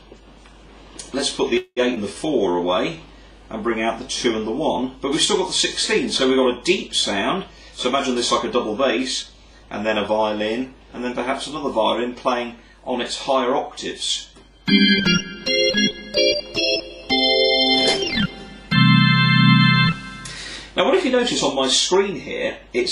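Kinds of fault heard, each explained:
Call audio freeze: From 1.57 to 1.80 s the sound stops moving forward. The last sound is stretched into a fading fill of about 191 ms, ending in roughly 50 ms of silence. Then the audio resumes exactly where it left off, with nothing lost. The cause is likely packets held up in transit, so the jitter buffer ran dry. The net effect is a gap inserted into the stream, adding 191 ms of delay.
Short concealed packet loss: At 1.95 to 1.99 s there is a brief smear. About 60 ms of audio never reached the decoder in time. The receiver patched the hole with a 17 ms continuation of the preceding sound, then blended back into real audio. Since more was dropped than filled, this quick skip takes back around 40 ms of the delay built up by the freeze.
Jitter buffer slow-down: Between 2.13 and 2.57 s the audio drags at about 90% speed while keeping its pitch. The receiver was building a reserve. 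It did this by repeating single pitch periods or slivers of pause many times over, adding 52 ms in total. Sounds in this stretch come out drawn out.
Jitter buffer speed-up: This occurs twice. From 7.44 to 8.16 s the audio runs at about 104% speed, with roughly 40 ms removed. From 9.22 to 11.49 s it runs at about 106%, with roughly 150 ms cut. In both stretches the buffer held more audio than its target. It trimmed short pieces of one or a few pitch periods in quick succession. The pitch stays the same, and the second, faster stretch sounds hurried.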